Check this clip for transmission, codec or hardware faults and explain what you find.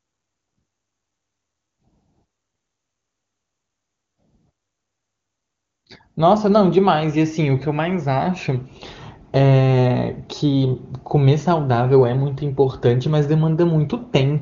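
Nothing to flag here; the speech sounds just as HD Voice on one of the higher AMR wideband rates should, with the top end simply stopping at around 7.2 kHz, as that codec's bandwidth dictates.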